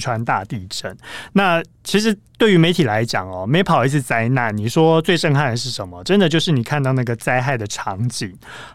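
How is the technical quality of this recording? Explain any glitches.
No technical faults can be heard anywhere in the recording, so there are no glitches to explain.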